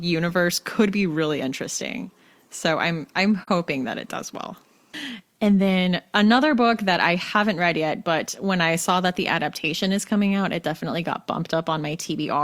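AAC frame loss with muting occurs at 3.43 to 3.48 s, between "interesting so I'm I'm" and "that it does well". The decoder zeroed the missing spectrum, and the overlapping windows fade the sound out and back in, leaving a brief dip of about 43 ms, which fits a single lost frame.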